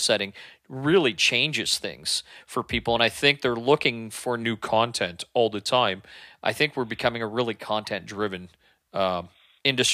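At 4.43 s the speech suddenly slows by about 6% and drops 112 cents, just over a semitone, then snaps back up at 6.12 s. The same slowdown and pitch drop returns from 8.17 to 9.29 s. Speed and pitch move together, so it's likely a drift correction step, where clock-matching software nudged the playback rate in one jump to refill its buffer. Being that abrupt, the detuned stretches are easy to hear.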